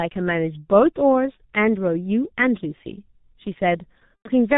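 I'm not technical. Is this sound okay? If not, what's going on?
No. The whole recording has passed through the G.723.1 codec, an old internet-phone compression scheme, and it was damaged heavily. The speech sounds muffled and hoarse because everything above 4 kHz is cut away and the voice is rebuilt only in coarse steps, so consonants blur together. A poor microphone can also sound dull, but it doesn't give this rough, grainy hoarseness.

Near the end, from about 4.16 to 4.30 s, there is VoIP packet loss concealed by the speech codec. Roughly 90 ms of sound went missing, which fits three of this codec's 30 ms chunks. Instead of a silent gap, the decoder stretched the last bit of voice into a sound that fades out, and because each chunk builds on the one before, the voice stays weak or distorted briefly after the sound returns.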